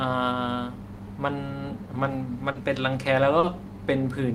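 Around 2.51 s there's a short concealed packet loss: about 40 ms of the speech never arrived in time, so the decoder papered over the gap by extending the last bit of sound it had, then blended back into the real signal by 2.58 s. It comes across as a quick smear or wobble. The same thing happens again at 3.39 s, another 40 ms hole patched the same way, ending around 3.46 s.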